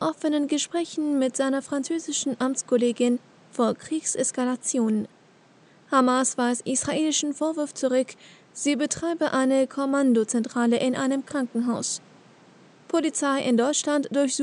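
Nothing stood out as a technical fault on listening through this audio.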